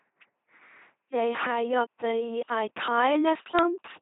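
An LPC-10 vocoder runs from start to finish, heavily damaging the speech. Nothing is left above 3.9 kHz. Each short stretch of the speech is rebuilt by a simple all-pole model of the vocal tract, driven by either a buzzing pulse train or noise and never a mix. This gives the flat, mechanical robot quality throughout, with buzz or hiss where the voicing choice goes wrong. The sound fits a 2.4 kbit/s coder.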